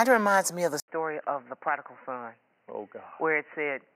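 At 0.8 s, right after "reminds me of the", the speech drops out for about 80 ms and returns dull and boxy, with nothing above 3 kHz, a few decibels quieter, and over a new, faint background noise. It stays that way to the end. This is likely an input switched to a poorer device mid-recording. A plain low-pass filter or codec bandwidth drop would not also bring the gap, the level step and the changed noise floor.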